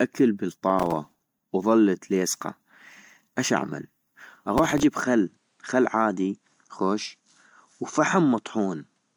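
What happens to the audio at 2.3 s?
At 2.3 s you're hearing generation loss, and it isn't specific to that moment; it runs through the whole clip. The speech sounds swirly and hollow, with consonant attacks smeared, more than a single MP3 pass at a bitrate that seems to be around 96 kbit/s would give. The likely cause is repeated re-encoding, perhaps roughly seven times, each pass quantising on a shifted frame grid so the noise and spectral holes pile up.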